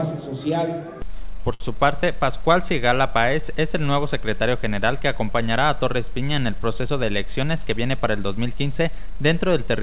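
At 1.54 s a short stall from a late packet holds the sound until 1.62 s. A packet arrived late, the jitter buffer ran dry, and the receiver stretched the last sound for 60 ms before resuming. Nothing is lost, but the sound hangs slightly too long.

From 6.87 to 7.43 s a jitter buffer speed-up plays the audio at 109% of normal rate while the pitch stays the same. The receiver is draining a backlog by cutting out small pitch-period slices, around 70 ms in total, so this stretch sounds briefly rushed. Throughout, the call path's band limit leaves nothing above 4 kHz, which fits G.711 mu-law at 64 kbps.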